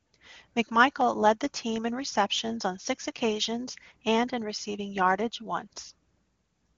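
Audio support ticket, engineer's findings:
No faults found in clip.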